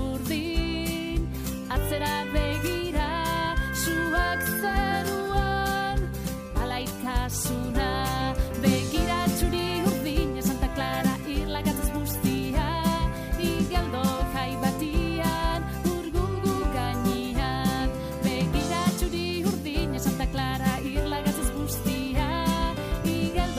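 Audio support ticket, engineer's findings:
No audible fault found; findings: none.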